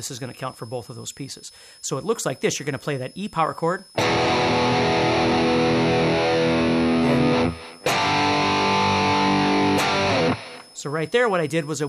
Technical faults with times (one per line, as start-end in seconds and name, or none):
0.00-11.89 switching supply whistle